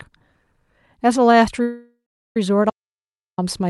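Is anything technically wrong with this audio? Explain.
Yes, there are two faults in this speech. From 1.62 to 2.37 s there is a call audio freeze: the sound decays into a fading buzz, then about 0.38 s of silence, and resumes where it stopped, delayed 0.73 s, likely from an emptied jitter buffer. From 2.70 to 3.38 s an audio dropout to silence removes 0.67 s outright, with no room tone and no decaying tail, likely a lost input, so that speech is gone rather than postponed.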